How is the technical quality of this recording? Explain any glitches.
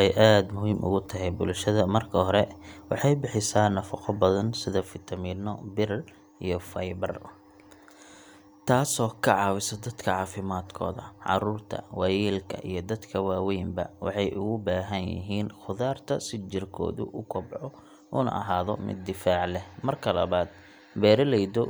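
The recording has one clear glitch, a sudden gain jump. At 4.83 s the level drops by about 5 dB in a single step and stays down until the end. The speech and background noise fall together, pointing to a digital gain change applied without a ramp, likely a setting or bit-shift change.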